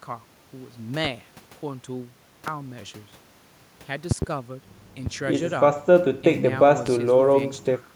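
Sharp loud pops, roughly 20 dB above the speech, land at 1.05, 2.48, 5.06 and 6.86 s, with a louder double pop from 4.11 to 4.25 s. Speech carries on beneath each one. A sudden voltage spike, likely from a plug, switch or static discharge, was added to the signal.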